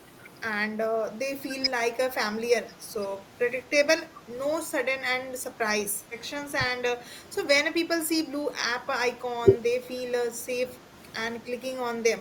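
Brief dips hit the speech at 0.68–0.72, 0.96–1.04, 2.02–2.09, 2.68–2.74 and 4.11–4.23 s. Each is a tenth of a second or less and about 5 to 15 dB deep. That's likely speech suppressed in double talk, with the echo canceller ducking this talker while the far end spoke.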